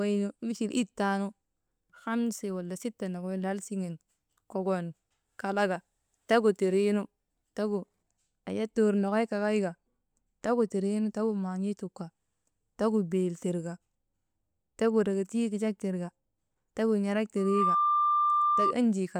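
From 17.37 to 18.75 s, loudspeaker feedback squeal: a 1.2 kHz tone swells within a fraction of a second, unlike a steady interference whine, reaching about 5 dB above the speech.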